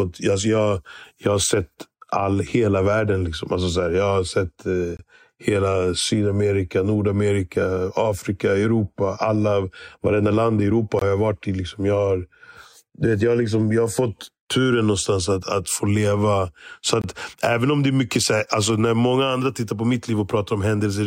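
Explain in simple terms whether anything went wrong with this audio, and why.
Three brief silences interrupt the speech, a fault called a gap between chunks. They fall at 4.97 to 4.99 s, 10.99 to 11.02 s (just before "har jag varit i") and 17.02 to 17.04 s (just before "även om det"). Each lasts about 23 milliseconds and they recur every 6 seconds. The audio was handled in 6-second pieces, and a sliver of silence was inserted at each join. No speech is lost, but each join is heard as a short hole.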